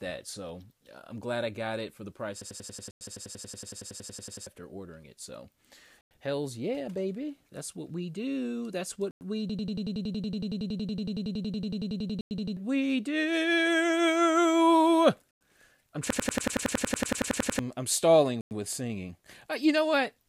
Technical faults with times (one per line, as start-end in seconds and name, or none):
2.41-4.47 system hang loop
2.91-3.01 gap between chunks
6.01-6.11 gap between chunks
9.11-9.21 gap between chunks
9.50-12.57 system hang loop
12.21-12.31 gap between chunks
15.31-15.41 gap between chunks
16.10-17.59 system hang loop
18.41-18.51 gap between chunks